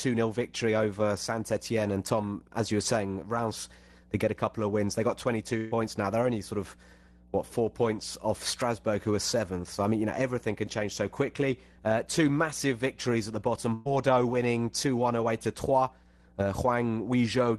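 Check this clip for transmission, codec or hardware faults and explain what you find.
Two faults are present in the speech: a continuous mains hum and two bursts of packet loss. The audio also passed through a call codec, likely Opus, with its upper band ending near 12 kHz.

Mains hum runs through the whole clip as a steady 60 Hz tone with low harmonics, sitting about 25 dB below the speech. A ground loop or nearby transformer is coupling the power line into the signal chain, producing a constant low drone under everything.

A burst of packet loss occurs at 5.57 to 5.74 s and again at 13.74 to 13.87 s, just after "victories at the bottom". Roughly 140 ms and 120 ms of audio went missing. The receiver extended the last sound and faded it, giving a brief held buzz or hiss before the audio jumps ahead.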